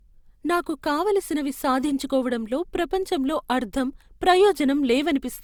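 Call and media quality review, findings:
Generation loss, throughout the speech. Swirly, hollow, smeared texture; consonant attacks blurred. Bandwidth still reaches about 20.2 kHz. Likely repeated Opus re-encoding, roughly four passes near 64 kbit/s, noise accumulating across shifted frame grids.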